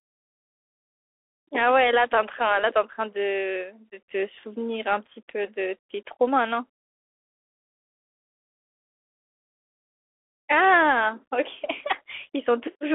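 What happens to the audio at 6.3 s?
At 6.3 s the speech carries the Bluetooth CVSD headset codec, which runs through the whole clip. The band is squeezed to about 300 Hz to 3.4 kHz, so the sound is thin and muffled. CVSD sends one bit per sample, saying only up or down, with a step that adapts. The damage is plainly audible. Sibilants turn scratchy, and a granular hiss sits under the speech. This fits a 64 kbps CVSD headset link.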